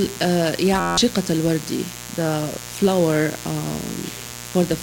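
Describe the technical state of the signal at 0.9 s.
At 0.9 s the sound is replaced by a steady, pitched buzz at about 86 Hz. This is a system hang loop running from 0.80 to 0.98 s: the system stalled while the audio hardware kept replaying the same ring buffer, cycling one 11.6 ms fragment 15 times. That fragment length fits a 512-sample buffer, and roughly a fifth of a second of real audio is lost beneath the repetition.

Underneath, a steady, raspy mains buzz continues, sitting roughly 15 dB below the signal. It comes from sharp switching spikes entering the signal path twice per cycle of 60 Hz mains. Those spikes spread energy across a dense ladder of 60 Hz harmonics extending up into the kilohertz range, which gives the buzz its coarse, edgy texture rather than a smooth hum.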